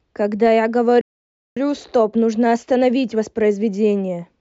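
A playback stall occurs from 1.01 to 1.57 s: the speech halts for about 0.55 s, likely because the player starved of data or was blocked, then resumes.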